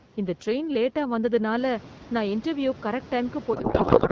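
From 3.53 s to the end, the speech turns into garbled noise and warble that barely follows it: a codec payload misread. The decoder is unpacking AMR-WB frames with the wrong bit layout, which fits octet-aligned payloads being read as bandwidth-efficient.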